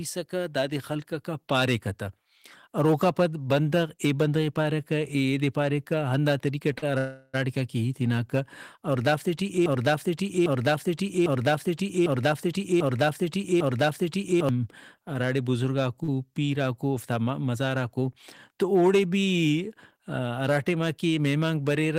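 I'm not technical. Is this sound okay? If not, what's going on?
No, the recording has several faults.

Throughout the speech there is hard clipping. The loudest peaks were pushed beyond what the recording chain could carry, so their tops were sliced flat. That adds a crackly roughness on loud syllables, affecting a small fraction of the sound.

At 6.78 s and again at 16.04 s there is a short stall from a late packet. Each time, a bit of audio arrived late, so the receiver held the last sound for about 40 ms before carrying on. The second stall comes just before "پیراکو اوفتا مزاراکو".

From 6.98 s to 7.36 s, just before "کہ ہیت ہناکہ", the sound gets stuck in a call audio freeze, likely from delayed network packets. The last sound is drawn out for about 0.35 s, with a brief silence, then resumes where it stopped.

From 9.66 s to 14.49 s a broken-record loop repeats a 0.8 s piece of speech six times back to back. 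That is likely a stalled player or stream resending what it last held. The speech that belonged there is lost.

From 12.11 s to 12.71 s, after "کہ ہیت ہناکہ", there is a jitter buffer speed-up. To catch up on built-up delay, the receiver cut out tiny slices, about 50 ms in total. The sound runs about 8% fast at unchanged pitch and feels slightly rushed.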